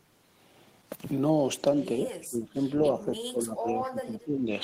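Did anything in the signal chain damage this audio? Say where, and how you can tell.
Yes. From 2.01 s to 4.53 s the speech sinks in and out, at its worst falling roughly 20 dB, with about two seconds affected in all. This is speech suppressed in double talk, likely from the call processing stage, where an echo canceller, hearing far-end audio over the talker, attenuated both. Unlike packet-loss dropouts, there is no robotic fill in the gaps.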